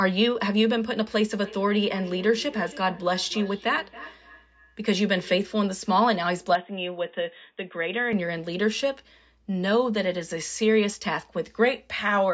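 From 1.36 to 5.57 s there is feedback echo between two devices. A second device in the room replays what this microphone sent, and this microphone catches it again. The speech returns roughly every third of a second, thin and ringing, peaking about 19 dB below the voice.

From 6.55 to 8.13 s the sound turns dull and boxy. It is also a little quieter. The change is instant, with no gap. The likely cause is an input switched to a poorer device.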